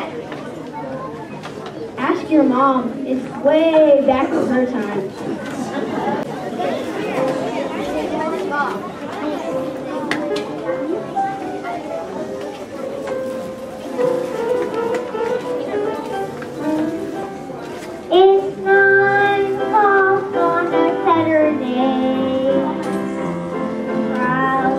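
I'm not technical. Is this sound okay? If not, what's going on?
Yes, nothing wrong here.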